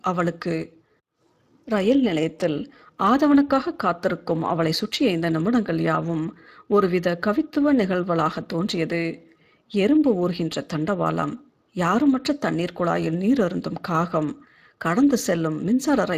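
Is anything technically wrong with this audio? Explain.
Yes. Speex codec damage runs through the whole speech clip, from start to finish. Speex is a CELP coder: it models the voice with a predictive filter and spends a limited budget of bits on the excitation signal that drives it. Here that budget is tight enough that the damage is plainly audible, giving the speech a grainy, hoarse texture, which fits a bitrate around 22 kbps. Nothing is present above 15.2 kHz.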